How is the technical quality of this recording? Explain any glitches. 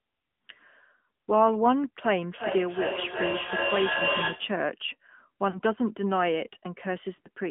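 Quality's limited: the whole thing has the thin, boxy sound of a phone call, and there are two short glitches near the end.

AMR narrowband mobile codec, throughout: The audio only spans roughly 150 Hz to 3.4 kHz, with nothing on top and little low end. The coding damage is plainly audible: the speech has that buzzy, synthetic edge you get when a vocal-tract model plus a handful of pulses stands in for the real waveform. The degree of it fits a mid-rate mode around 10 kbps.

Lost AMR speech frames, at 5.50 to 5.61 s and 7.16 to 7.29 s: In the first, about 40 ms of speech goes missing and the decoder papers over it by repeating the last good pitch and spectral shape at dropping gain. You hear a brief smeared dip before things pick back up a bit rough. The second is the same kind of hiccup but patchier, spread over about 140 ms with no gap longer than 20 ms, so it comes across as a stuttery warble.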